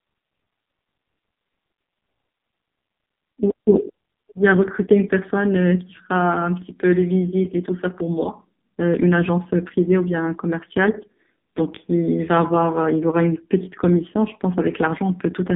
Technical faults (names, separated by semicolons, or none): AMR narrowband mobile codec